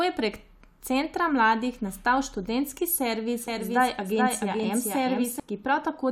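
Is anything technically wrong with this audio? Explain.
Yes. After "mladih nastal študentski servis", from 3.48 to 5.40 s, a doubled audio track appears: a full-band copy trails the speech by roughly 400 ms, about 5 dB quieter, with abrupt entry and exit. Likely cause is a second, slower capture path mixed in. The spectrogram shows every pattern repeated, shifted right, with no decay tail.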